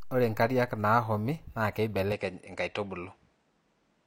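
Input switched to a poorer device at 2.12 s, running to the end: the speech suddenly loses everything above 9.9 kHz and takes on a faint new background noise, with no gap and no clear level change, likely because recording moved to a narrower-band microphone mid-clip.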